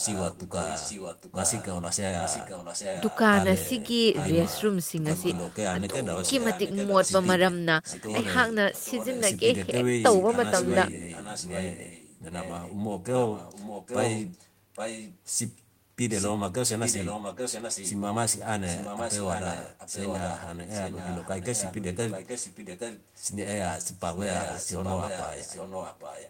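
A faint copy of the speech trails it by about 0.83 s, roughly 10 to 15 dB quieter, from 0 to 3.17 s, 4.13 to 7.25 s, 7.83 to 8.15 s, 8.75 to 9.21 s, 10.04 to 16.29 s, 16.82 to 17.93 s, 18.66 to 23.25 s and 23.98 s to the end. This is an echo leak, likely from a far-end loudspeaker whose echo canceller let the returned sound through.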